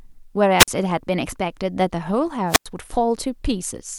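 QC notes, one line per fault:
0.59–0.68 s and 2.48–2.66 s, wireless microphone squelch dropout: each time the RF signal fades, hiss swells briefly, then the receiver's squelch gates the output to near silence, about 48 ms in the first event and about 98 ms in the second, before the speech returns. The hiss rising into the gap marks this as an analogue radio fade, unlike a digital packet dropout, which cuts to an abrupt, clean hole.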